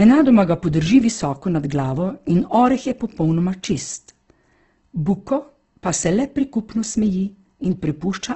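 From start to end, the speech sounds rough and grainy. Nothing comes through above about 8.1 kHz, so the top is dull. This is likely Opus compression, working in its music mode. That mode keeps each band's overall energy but has too few bits for detail. It fills the gaps with copied lower bands or noise. The damage is heavy. The tone has a gritty texture, which fits a bitrate near 12 kbps.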